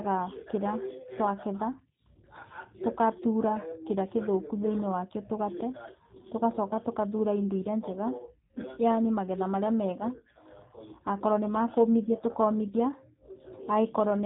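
From start to finish the speech sounds slightly rough and synthetic, with nothing above about 3.8 kHz. This is G.729 codec damage: each 10 ms frame is rebuilt from a vocal-tract filter, pitch predictor and sparse pulses, consistent with an 8 kbit/s G.729A stream.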